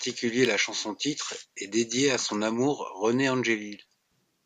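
A speech recording carries an electrical switching spike at 0.45 s: a sharp snap, about a millisecond long, peaking fairly high at roughly -10 dBFS and laid on top of the speech. It is most likely a nearby switch or static discharge arcing into the audio line. It is added energy rather than missing audio, unlike a dropout click, and its hard edge sets it apart from a mouth click.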